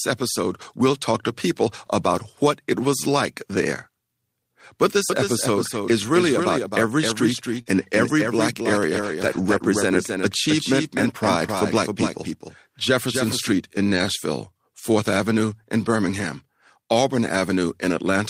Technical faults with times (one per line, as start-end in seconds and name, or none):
5.10-13.52 doubled audio track
7.61-7.68 short concealed packet loss
7.66 lost packet rebuilt from error correction
9.02-9.64 lost packet rebuilt from error correction